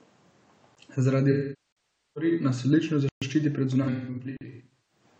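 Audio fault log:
0.75 s: block of digital silence. A 16 ms hole drops to zero and returns with no fade.
1.31 to 2.31 s: AAC frame loss with concealment. About 0.81 s of coded speech is lost just before "nas odlično zaščiti". The decoder rebuilds it from the last good spectrum, so the speech turns smeared and noisy, then decays and fades back in.
1.72 to 1.77 s: block of digital silence. A 43 ms gap, which fits a 2048-sample buffer, opens inside that patch.
3.09 to 3.22 s: block of digital silence. Right after "nas odlično", a 128 ms dropout cuts hard to zero. It is heard as a hole.
3.82 to 5.03 s: AAC frame loss with concealment. About 0.68 s of losses is scattered over roughly one second, with the longest run around 150 ms. Each gap is patched from the previous spectrum, giving brief phasey, noisy stretches.
4.37 to 4.41 s: block of digital silence. Another 43 ms zeroed block, again fitting a 2048-sample buffer, gives a short hole.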